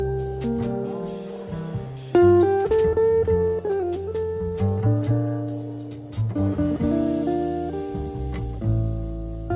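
No technical faults can be heard anywhere in this audio.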